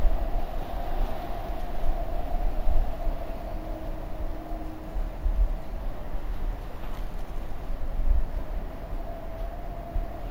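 From start to finish the sound carries imaging from sample-and-hold upsampling: it was raised from 16 kHz to 48 kHz by repeating each sample with no smoothing filter. Mirrored copies fold back above the old 8 kHz limit, heard as a thin metallic fizz about 31 dB below the sound that rises and falls with it. A spectrogram shows an inverted mirror image filling 8 to 16 kHz, and the waveform zoomed in shows small staircase steps.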